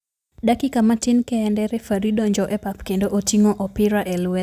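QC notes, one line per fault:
No technical faults were found in the signal of this speech recording.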